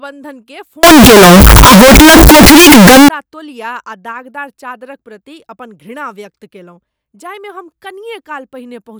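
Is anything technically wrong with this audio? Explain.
Yes. From 0.83 to 3.09 s the speech turns into very loud, harsh distortion, with quiet moments blaring as loudly as the rest. This is likely signed and unsigned mixed up: flipping the top bit, which fits 16-bit samples, turns each zero crossing into a full-range jump.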